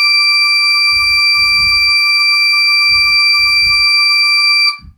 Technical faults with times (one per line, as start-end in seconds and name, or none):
none